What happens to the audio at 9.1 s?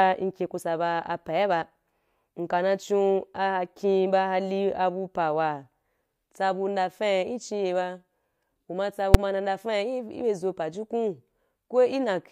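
A single sharp, very loud bang at 9.14 s, just before "ma ndafa". It is invalid numbers at full scale: a calculation produced infinite or invalid values that were pinned to maximum amplitude for about 5.8 ms, which fits a 256-sample processing block.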